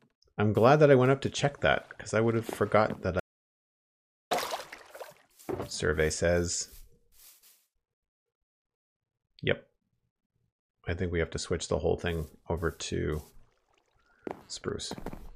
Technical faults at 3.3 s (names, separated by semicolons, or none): audio dropout to silence